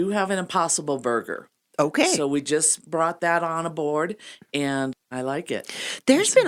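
Nothing stood out as a technical problem on listening to this speech recording.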